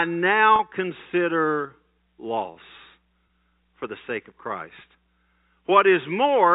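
At 0.56 s, packet loss with pitch repetition cuts out about 30 ms of the speech, up to 0.59 s. The receiver fills the hole by looping the last pitch period. It sounds like a brief, slightly buzzy hold on the voice. At 3.27 s a shorter 20 ms gap is bridged the same way, ending at 3.29 s. Both gaps fit a few lost 10 ms packets. The telephone-band G.711 coding adds only a faint hiss.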